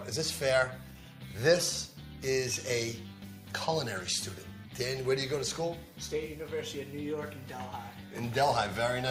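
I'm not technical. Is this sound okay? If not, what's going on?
Yes, nothing wrong can be heard anywhere in the sound.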